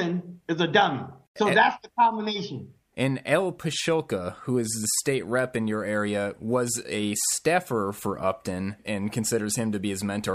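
No technical faults can be heard anywhere in this clip.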